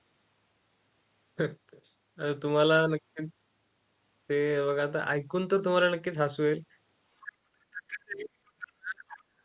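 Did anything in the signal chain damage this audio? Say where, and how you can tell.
Yes. Speech suppressed in double talk, at the call-processing stage. The level drops by about 40 dB from 7.22 to 8.34 s and from 8.55 to 9.05 s. This is likely the echo canceller ducking overlapping talk.

The other side's voice is leaking through, at the same stage. A faint second voice appears from 9.09 to 9.23 s, about 20 dB under the speech. This is likely uncancelled loudspeaker echo.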